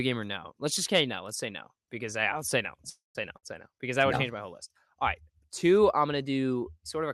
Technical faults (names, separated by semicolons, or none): call audio freeze; burst of packet loss